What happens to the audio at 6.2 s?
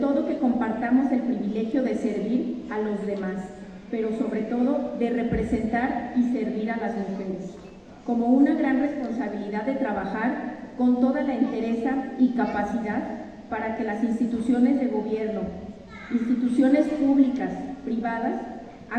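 Nothing goes wrong at 6.2 s; the audio plays through that moment intact, with no dropout, click, glitch or other fault.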